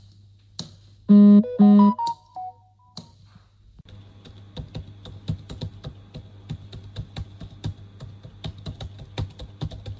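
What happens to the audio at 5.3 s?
Nothing goes wrong at 5.3 s; the sound carries straight through that point without any dropout, glitch or distortion, just as it comes over the wideband call path, with nothing above 8 kHz.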